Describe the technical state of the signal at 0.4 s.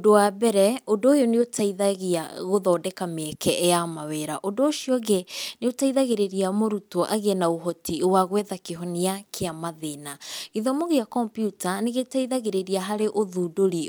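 At 0.4 s the speech signal is intact, with no audible technical fault at that moment.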